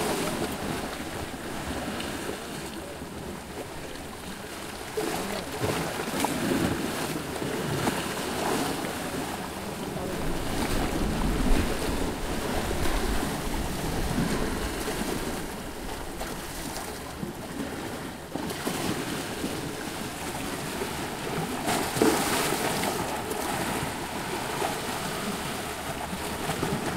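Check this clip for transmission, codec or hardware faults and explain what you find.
Processor overload crackle appears twice, from 10.09 to 10.82 s and again from 15.17 to 15.54 s. The processor could not fill its very short buffers, each well under a millisecond, on time. In the first burst dozens of deadlines slipped in a row, and in the second about a score. Each miss replayed a sliver of old audio with abrupt edges. Packed together, these form a gritty, tearing crackle over the sound that ends once the load eases.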